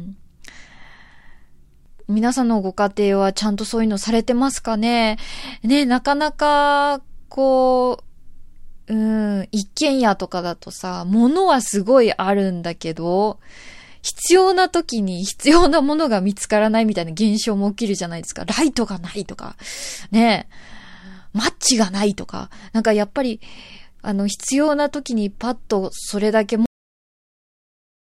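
The final buffers of the recording were never written out, so the capture stopped while the speech was still going. The result is a cut-off end at 26.66 s. The voice breaks off mid-sound and drops straight to digital silence, with no natural decay or room tail. That dead silence then holds for roughly the last 1.5 s of the clip.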